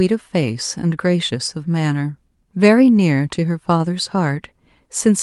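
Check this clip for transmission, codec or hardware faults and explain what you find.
No faults turn up in the speech, which carries the ordinary coding texture of a call path with its top end extending to about 12 kHz, consistent with Opus running at a fairly generous bitrate.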